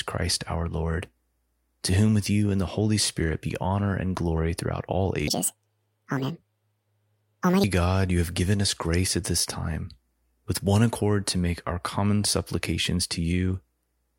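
From 5.28 to 7.64 s, a section at the wrong speed, likely played against a mismatched clock, runs 1.76 times fast, pushing the speech up about ten semitones and hurrying it.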